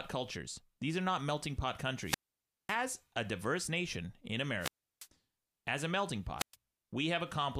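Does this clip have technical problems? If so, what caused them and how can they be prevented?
Yes. Wireless microphone squelch dropouts at 2.02 to 2.78 s, after "are not melting pot", with the sound muted for about 0.55 s until "a diverse nation in"; at 4.59 to 5.08 s, after "a diverse nation in", muted for about 0.34 s before "as a melting"; and at 6.38 to 6.56 s, after "as a melting", muted for about 0.12 s. Each time, the FM radio link from the transmitter weakens until the receiver's squelch gate judges the signal too poor and cuts the output, leaving a hole in the speech. Keeping a clear line of sight, shortening transmitter-to-receiver distance, using diversity antennas and choosing a clean frequency would prevent these fades.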